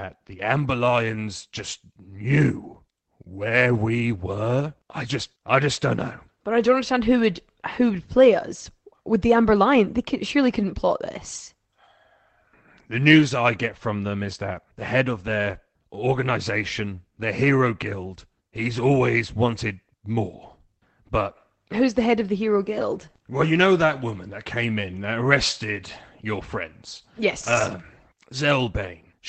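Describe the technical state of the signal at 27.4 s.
At 27.4 s the speech falls within a stretch of lost packets rebuilt from error correction, 27.19 to 27.73 s, just after "that arrested your friends". Low-bitrate Opus copies, about 280 ms in total, stand in for the missing audio, so there is no gap or smeared buzz as with plain concealment, just briefly rougher, noisier speech.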